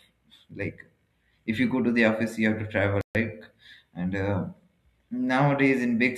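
Speech clip with one playback stall. Right after "you have to travel", the sound cuts to silence at 3.01 s. It resumes at 3.15 s, about 138 ms later. The likely cause is the player running short of data or its thread being briefly blocked.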